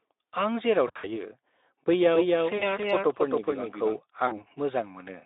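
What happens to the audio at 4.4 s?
From 4.27 to 4.44 s there is VoIP packet loss concealed by the speech codec. About 40 ms of audio went missing, which fits two lost 20 ms frames. The Speex decoder filled the hole by repeating its last pitch and spectral shape at falling gain, so the speech smears into a fading buzz or coloured noise. Unlike a plain dropout, there is no silent gap, and the weakened, blurred sound lingers past the loss.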